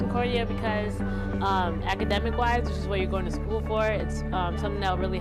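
At 2.11 s a loud pop breaks in, and a second follows before 2.20 s. The pair lasts under a tenth of a second. The pair peaks a few decibels above the surrounding sound, which carries on underneath without a gap. The cause is likely a sudden voltage step or pulse, from a plug, a switch, static or a driver glitch, added to the signal. Later circuits shape each pulse into a sharp thump.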